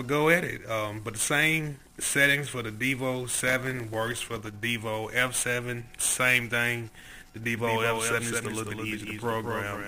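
From 3.48 to 4.49 s and again from 7.00 to 7.44 s, a gritty crackle tears across the sound. This is processor overload crackle: dozens of tiny buffers, each roughly 1.5 ms, miss their deadlines and leave brief silent gaps. From 7.56 s to the end, a clean copy of the sound abruptly appears about 200 ms behind, only about 5 dB quieter. This is a doubled audio track, likely picked up a second time by a slower path.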